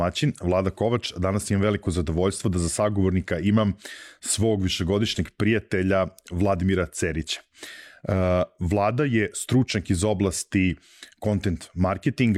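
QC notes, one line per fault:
No faults found.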